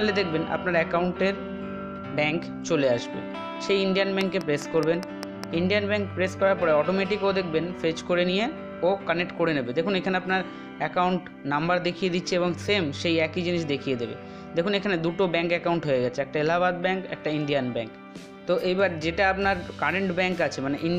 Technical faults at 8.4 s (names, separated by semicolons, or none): none